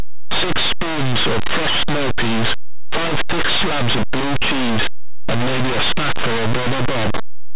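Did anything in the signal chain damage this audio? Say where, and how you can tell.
Yes. Linear audio read as companded runs throughout the clip, and it is a sample-format conversion fault at the decoding stage. The speech is plain linear 8-bit audio, but it is being expanded as if each byte were a mu-law code. Small samples just to one side of zero map to the largest mu-law outputs, while their mirror values stay small, so the speech becomes harsh, very loud distortion.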